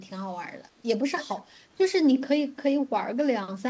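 At 1.31 to 1.36 s an echo leak appears as a faint speech scrap 242 ms late, roughly 30 dB down, likely residue from an incomplete echo canceller.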